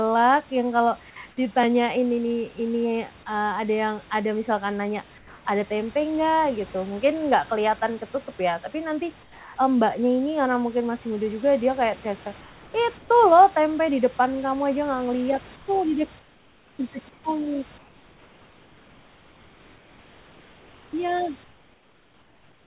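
In the pauses at 5.18–5.45 s, 9.23–9.56 s (after "ketutup ya tapi nanti"), 12.41–13.1 s, 15.56–15.68 s (between "aja nggak ngeliat itu" and "tuh di dek"), 16.19–16.79 s, 17.09–17.24 s, 17.78–20.93 s and 21.44 s to the end, the room background turns into a flat, featureless hiss about 3 to 7 dB quieter. This is comfort noise in place of the background, likely because the sender stopped transmitting during silence and the receiver filled the gap with synthetic noise. The call audio itself carries nothing above 4 kHz.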